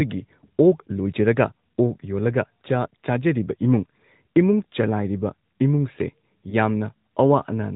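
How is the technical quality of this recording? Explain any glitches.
Technical quality is limited by narrowband mobile coding throughout, with one brief dropout near the end.

AMR narrowband mobile codec damage is plainly audible across the whole recording. The speech sounds band-limited, with nothing above 4 kHz, and has a buzzy, synthetic edge. That character fits AMR-NB at a mid-rate mode around 10.2 kbps. The codec resamples to 8 kHz and rebuilds the voice from a vocal-tract model driven by a few pulses per 5 ms subframe. Fine detail and top end are discarded, and whatever the model cannot represent comes out as buzz.

Lost AMR speech frames cause a short glitch from 6.50 to 6.55 s. It is heard as a momentary dip or warble in the speech. The length fits a single lost 20 ms frame. When a frame fails its checksum, the decoder conceals it by reusing the last good pitch and vocal-tract settings at reduced gain. 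With only one frame missing, the result is a quick smeared blip rather than a fade to silence.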